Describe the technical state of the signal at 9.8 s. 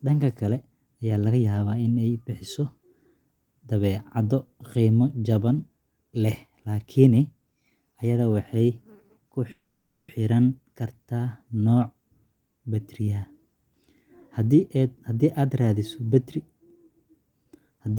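Call audio freeze, 9.51 to 10.10 s: the last sound is stretched into a fading fill, likely a jitter-buffer underrun; speech resumes 0.57 s late with nothing lost.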